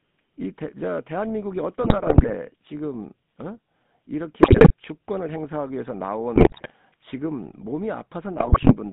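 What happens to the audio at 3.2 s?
At 3.2 s, as across the whole clip, the speech carries GSM full-rate codec damage. The excitation is rebuilt from regularly spaced pulses, giving a plainly audible buzzy, gravelly roughness rather than the clean dullness of simple band-limiting, with nothing outside roughly 150 Hz to 3.7 kHz, consistent with a 13 kbps coder.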